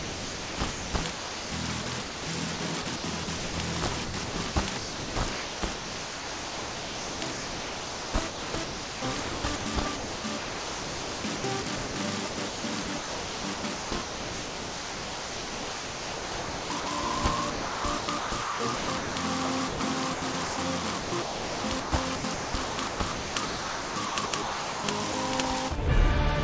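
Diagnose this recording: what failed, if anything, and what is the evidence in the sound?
Sound chopped by the voice detector from 0 to 16.86 s, 17.50 to 19.16 s and 19.68 to 25.14 s, in call processing: quiet passages, about 11.4 s, 1.1 s and 2.9 s respectively, drop out to a synthetic background, likely the sender's detector gating transmission and comfort noise filling, over a wideband path with nothing above 8 kHz.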